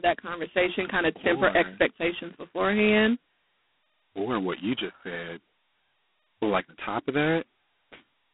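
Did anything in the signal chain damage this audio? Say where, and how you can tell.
Yes. G.726 ADPCM damage at the codec stage runs throughout the speech: a harsh, rasping hiss rises and falls with the talker's level, and nothing passes above 3.8 kHz. This fits 16 kbit/s, where only 2 bits per sample code the prediction error.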